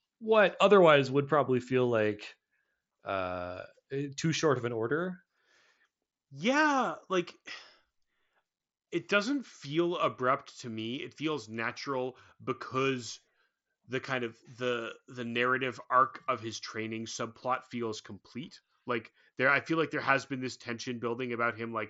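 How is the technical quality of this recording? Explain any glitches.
Nothing stood out as a glitch on listening to this speech recording, which comes across as ordinary wideband Bluetooth headset audio.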